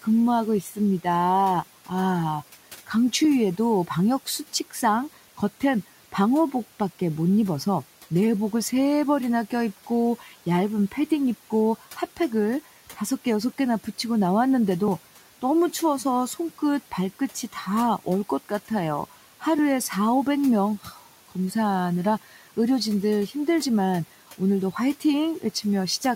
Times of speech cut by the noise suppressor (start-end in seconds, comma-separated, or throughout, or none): 20.83-21.07